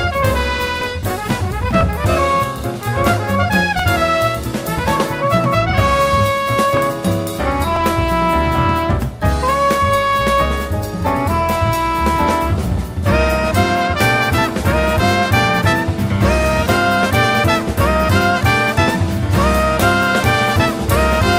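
Small clicks or tiny skips land at 0.81, 1.81, 3.79, 4.79, 5.78, 6.77 and 7.76 s, mostly about a second apart. This is overlap between stream segments: one-second segments claim overlapping time, and trimming that overlap drops a few milliseconds of sound, so the waveform jumps.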